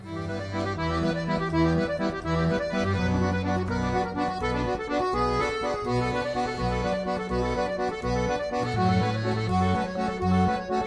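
No technical faults can be heard in this audio.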